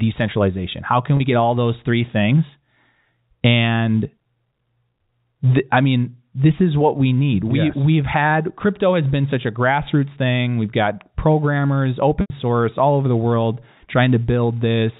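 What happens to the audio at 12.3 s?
Just before 12.3 s the sound briefly turns into a held, buzzy tone that thins away and then picks back up. This is packet loss with pitch repetition, spanning 12.21 to 12.30 s, about 90 ms of missing audio, which fits three lost packets. To bridge the gap, the receiver kept replaying the last pitch period and faded it down over roughly 50 ms. The sound then returns through a short cross-fade, within the narrow telephone band of the G.711 line.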